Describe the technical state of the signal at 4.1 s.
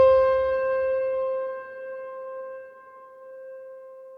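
At 4.1 s the signal is intact, with no audible technical fault at that moment.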